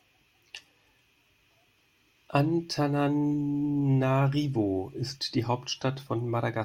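No dropouts, clicks, level jumps, distortion or timing breaks can be heard anywhere in the recording, so no technical faults are present.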